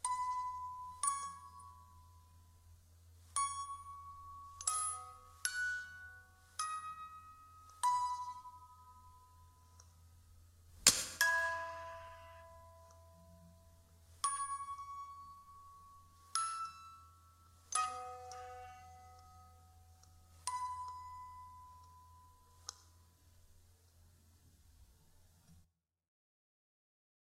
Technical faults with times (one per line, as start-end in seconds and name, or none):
none